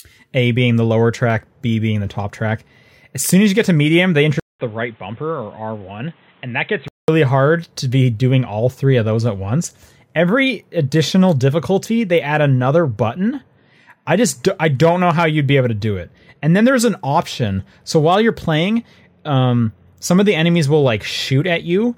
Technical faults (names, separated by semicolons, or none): input switched to a poorer device